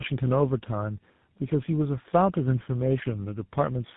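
Speech, degraded throughout by tandem speech coding: the sound has the layered roughness, muffling and warble of several low-rate speech codecs applied one after another, which points to a chain such as G.726 at 24 kbit/s, AMR-NB at 7.95 kbit/s and GSM full rate, with G.711 links between. Each coder reprocesses the previous one's errors, so the artefacts compound. The band stops at 3.8 kHz.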